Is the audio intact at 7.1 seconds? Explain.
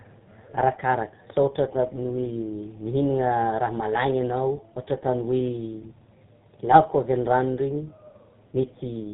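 No. At 7.1 seconds, as across the whole clip, the speech shows tandem speech coding. It passed through two speech codecs in a row, the last likely GSM full rate. Each re-coded the prior output. It sounds rough, muffled and warbly, with nothing above 3.8 kHz.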